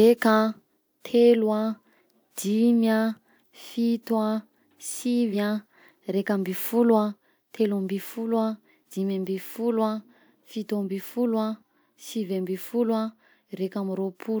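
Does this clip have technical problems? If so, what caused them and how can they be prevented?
Yes. Compressed frames were skipped twice: whole frames of the encoded stream were either missing or rejected by the decoder as damaged, so they were never played. In this speech the audio jumps ahead by around 50 ms at 5.32 to 5.34 s and again at 8.85 to 8.90 s. Checking file integrity after transfer and enabling error protection or retransmission on the stream would prevent these gaps.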